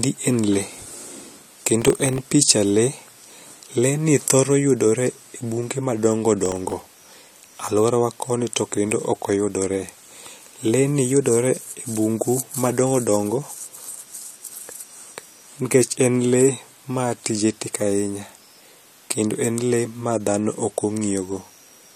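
A speech recording with processor overload crackle in two bursts, 1.71 to 2.27 s and 6.46 to 6.72 s. The machine kept missing deadlines on very short buffers, around a millisecond and a half each, and every miss dropped a sliver of silence, so the speech gets a gritty tearing until the load eases.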